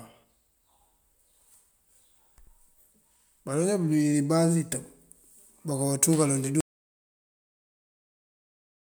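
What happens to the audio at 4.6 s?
Nothing goes wrong at 4.6 s: the speech there carries on intact, with no break, glitch or change in the sound.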